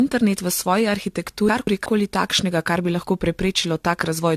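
From the start and through the whole speech clip, the sound is swirly, smeared and hollow, and consonant attacks blur. This is generation loss. The likely cause is repeated AAC-LC coding at 64 kbit/s, about four times. Each pass requantises on a shifted frame grid, stacking noise and spectral holes.

From 1.49 to 1.86 s, chunks play out of order. One block of about 186 ms arrives one chunk late and plays after its successor. Nothing is missing, but the order is wrong. There are three hard joins, and the moment sounds jumbled before "koli takšnega kar bi".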